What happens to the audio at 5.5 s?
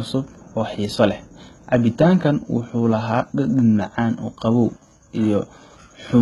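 At 5.5 s the speech carries the same damage heard across the whole clip, likely HE-AAC compression at a very low rate, consistent with roughly 16 kbps. The treble is rebuilt by copying lower bands upward, so sibilants sound gritty and metallic, and nothing remains above 11.8 kHz.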